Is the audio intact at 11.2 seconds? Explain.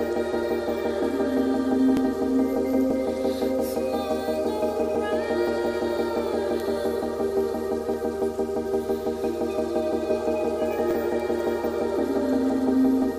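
No, not quite. At 11.20 s there's a bit error spike: a single sample where one bit got flipped, either in memory or somewhere on the digital link. That sample's value jumps by a power of two and then snaps straight back on the next one. You hear it as one sharp, bright tick, spread right across the spectrum and unrelated to the surrounding sound, because it comes from the data path rather than the signal.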